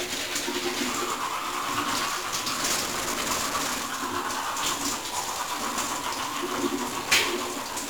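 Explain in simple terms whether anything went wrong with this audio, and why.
Something did go wrong, and it lasts the whole clip. The audio has 1-bit DFPWM compression. This format keeps only one up-or-down step for each tiny slice of sound. That coarse tracking adds a heavy fuzzy crackle everywhere. The high, crisp detail is buried under hiss.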